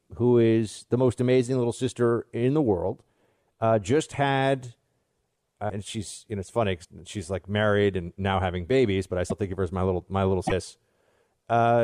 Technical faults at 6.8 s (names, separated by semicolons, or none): broken MP3 bit reservoir